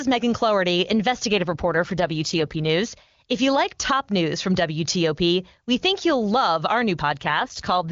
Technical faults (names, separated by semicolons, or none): AMR rate drop